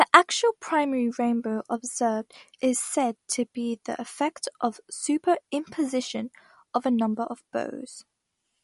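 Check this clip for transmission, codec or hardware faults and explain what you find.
One codec fault runs through the whole speech clip. Throughout, the sound is plainly damaged: watery and swirly, with metallic chirps on s sounds, smeared attacks, and nothing above 11.2 kHz. This is likely MP3 compression at a low rate, which fits about 48 kbps. With so few bits, the encoder drops weaker frequency lines that then flicker on and off between frames, and it removes the treble above a fixed cut-off.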